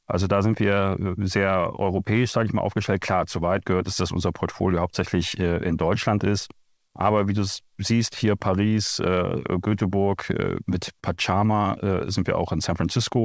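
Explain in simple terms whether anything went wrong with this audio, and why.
Right after "äh mit", the speech catches twice in quick succession: a short stall from a late packet at 11.00 to 11.06 s and another at 11.15 to 11.20 s. Each time, an audio packet arrived late over the call link (a G.722 path with nothing above 8 kHz), so the receiver held the last sound for about 30 ms and then 23 ms until the packet arrived. Nothing is lost, but the sound drags briefly and the playback runs a little later afterwards.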